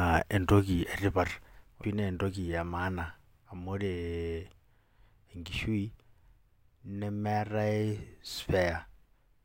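A speech recording with a single abrupt digital blip at 1.84 s, a brief glitch that breaks into the sound for an instant. It comes from damaged data in the compressed stream: corrupted bytes there made the decoder misread the frame, lose sync and resume at the next valid frame header.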